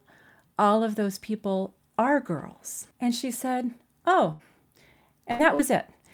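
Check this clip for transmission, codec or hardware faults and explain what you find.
Three dropouts, all from network loss, late in the speech.

Burst of packet loss at 4.31 to 4.42 s and again at 5.31 to 5.42 s: about 80 ms of packets never arrived each time, so the receiver stretched the last sound for roughly 78 ms, fading it into a buzz or hiss before jumping ahead past the missing stretch.

Short concealed packet loss at 5.55 to 5.62 s: a smaller hole of about 40 ms, patched by continuing the preceding sound and blending back in. You get a quick smear or wobble rather than a clear gap.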